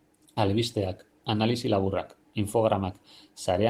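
No technical faults are audible.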